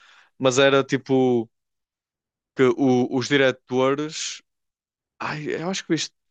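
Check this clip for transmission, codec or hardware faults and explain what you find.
No faults detected here.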